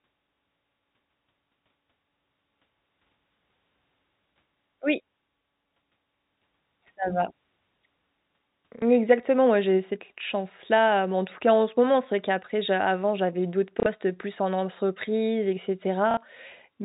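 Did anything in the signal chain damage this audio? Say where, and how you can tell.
Yes, at the network stage: packet loss with the last packet repeated. At 8.79 s, just before "exactement moi j'ai cette", 30 ms of sound repeats. At 13.80 s, between "j'a avant j'avais d'autres" and "plus en entreprise et", and at 16.11 s, right after "plus en entreprise et", 60 ms repeats. These lengths fit 30 ms packets, one lost and then two. The receiver replayed the last good packet. The repeats ignore pitch, so the single repeat at 8.79 s is a small blip and the two-packet runs sound like short robotic stutters. The band-limited telephone sound of the G.711 link carries through these gaps.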